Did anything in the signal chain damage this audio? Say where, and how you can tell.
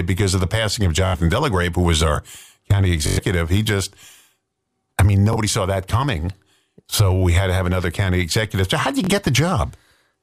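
Yes, Bluetooth stutter in the wireless link: the receiver replays its last slice at 1.07, 3.07, 5.33 and 9.04 s, then jumps ahead.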